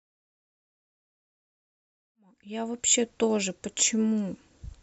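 There are no technical faults to describe in time order, only a smooth fade-in that reaches full level at 3.12 s.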